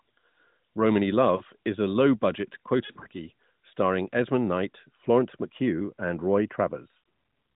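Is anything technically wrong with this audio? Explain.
Yes. There are lost AMR speech frames. Radio errors corrupted frames, and the decoder filled each gap by repeating the last good pitch and vocal-tract settings at falling gain. At 1.36–1.42 s, just before "is a", a gap of about 40 ms (roughly two frames) gives a brief dip and warble. Between 2.86 and 3.07 s, short scattered losses, none longer than about 40 ms, make the sound flutter. At 6.98 s a shorter dropout causes another quick dip.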